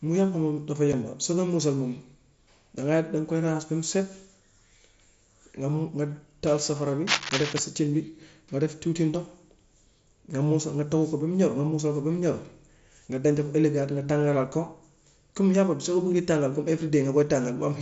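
A speech recording carried over a wideband mSBC Bluetooth headset link, whose 8 kHz top end is audible throughout, with two faults. At 0.93 s, just before "soo koy mussal moom", a tiny hole of about 7.5 ms opens with hard edges. This is unconcealed Bluetooth headset packet loss: one voice frame between headset and phone never arrived, and silence or an idle pattern filled its place. From 7.07 to 7.59 s, right after "taal safara bi", a rough, uneven scratching rustle runs over the voice at nearly the level of the speech itself. This is cable scratch noise, likely from a worn cable or connector being moved so that its contact resistance jumped rapidly.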